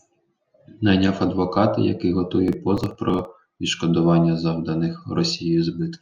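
A speech recording with processor overload crackle from 2.48 to 3.25 s. Through that stretch the audio gets gritty and torn as many tiny buffers, each around 3 ms, miss their deadline and are skipped outright, leaving small hard-edged gaps. Unlike a single dropout, it's a dense cluster of a dozen or more skips. Unlike clipping, the roughness doesn't follow loudness: it starts and stops with the load.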